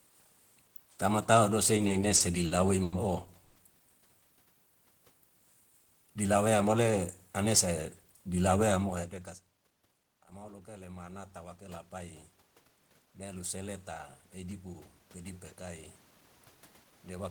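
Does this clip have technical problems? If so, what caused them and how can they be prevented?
Yes. There are four kinds of problem in this speech.

From 1.77 to 2.93 s there are repeated stalls (stutter). Packets kept arriving late, so the jitter buffer ran dry eight times. Each time the receiver stretched the last sound to bridge the wait. The longest gap was 80 ms, and 220 ms was filled in total, about a fifth of that span. Nothing is lost, but the speech drags and stutters. A larger or more adaptive jitter buffer on a steadier network path would prevent this.

From 3.44 to 3.56 s there is a call audio freeze. The sound hangs on a held, continued tone for 110 ms and never drops to silence. Then the speech resumes where it stopped. The likely cause is a sudden 110 ms rise in network delay that emptied the jitter buffer. Reducing delay spikes, for example by prioritising voice traffic, would prevent it.

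From 6.10 to 6.64 s and from 14.43 to 14.74 s there is jitter buffer speed-up. Both times the buffer held more audio than it wanted. The receiver cut out short pitch-period pieces to catch up. The speech runs at 111% speed with its pitch unchanged and sounds hurried. About 70 ms was removed in the first stretch and about 40 ms in the second. Smoother packet delivery would keep the buffer from overfilling.

From 10.35 to 12.26 s there is automatic gain rising. The input level had fallen by about 21 dB. The gain control raised its gain by about 6 dB over nearly two seconds. Voice and room noise swell up together. The talker moving around 8.5 s is natural and not a fault. A steady microphone distance and a gentler gain control setting would prevent this swell.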